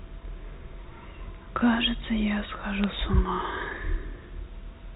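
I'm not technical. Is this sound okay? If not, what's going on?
No. There are bit errors on a digital phone line at about 2.84 s. A few bits in the phone signal got flipped, each corrupting a single tiny slice of the sound. The result is a brief glitch in the speech, which carries the usual muffled telephone sound.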